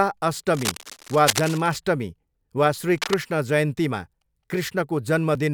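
Speech, with cable scratch noise twice, from 0.53 to 1.78 s and again from 2.98 to 3.20 s: a rough, uneven rustle sitting around 10 dB under the voice, likely a worn connector being jostled.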